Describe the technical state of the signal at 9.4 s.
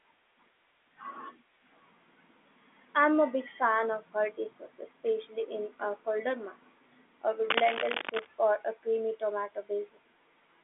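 At 9.4 s the audio is intact, with the speech carried cleanly through G.711 telephone coding, which confines it to the phone band with nothing above about 3.7 kHz.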